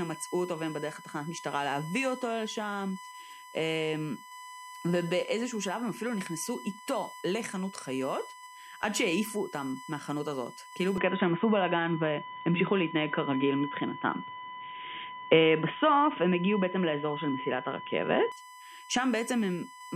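A steady, fixed-pitch whine at 1 kHz sits under the speech from the first moment to the last, roughly 15 dB below it. This is USB whine: the bus draws current in 1 ms frames, and that regular pulsing leaks into the audio path through shared power or ground, showing up as a tone at exactly the frame rate.

At 10.98 s the speech abruptly turns duller and narrower, with nothing above 3.8 kHz, a level shift of around 5 dB, and a new background noise floor roughly 35 dB under the speech. There is no gap at the change. The sound stays this way until 18.32 s, when the fuller, brighter quality returns just as suddenly. The likely cause is the input being switched to a poorer device, such as another microphone or a headset's call profile, for that stretch.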